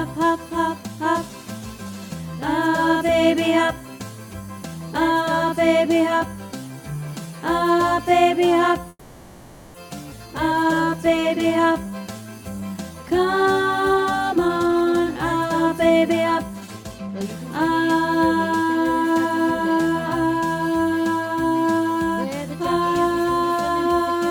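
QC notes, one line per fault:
8.89–9.76 s, call audio freeze: The sound stalls and a fading buzz or hiss fills about 850 ms, then 30 ms of silence. Likely delayed packets emptied the jitter buffer. Nothing is lost.
10.10–10.13 s, skip ahead: Playback jumps forward with only a 10 ms join. Roughly half a second of audio is gone, dropped while later audio was already queued.
10.28–13.86 s, jitter buffer slow-down: Audio runs at 91% speed with unchanged pitch. Repeated pitch periods add 343 ms to rebuild the buffer's reserve, drawing sounds out.
13.93–17.69 s, jitter buffer speed-up: Audio runs at 118% speed with pitch unchanged. Removing short pitch-period pieces trims about 0.7 s of excess buffer delay, so it sounds hurried.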